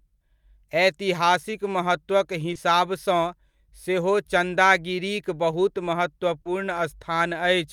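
Twice in this speech, packets carrying a slice of the call arrived too late for the decoder, and the receiver concealed the gap with short concealed packet loss, extending the preceding sound and then crossfading back. At 2.53 to 2.57 s about 20 ms was synthesised, leaving a smear. At 6.41 to 6.47 s the patch ran to 40 ms, long enough to hear a brief wobble where the sound briefly blurs before blending back.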